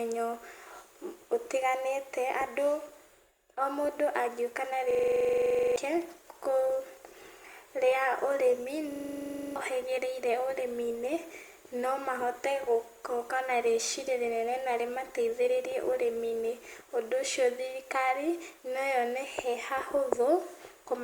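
Just after "o mũndũ" at 4.52 s the quality changes suddenly, with more codec artefacts and no gap, as an adaptive stream at a lower bitrate drops from Opus 64 to 32 kbit/s until 16.52 s. Within that stretch, from 4.91 to 5.76 s and again from 8.92 to 9.56 s, a machine-gun stutter at 23.4 Hz is a system hang loop. A frozen system let the hardware replay one 42.67 ms piece, which fits a 2048-sample buffer, and about a second and then roughly 0.7 s of audio are lost.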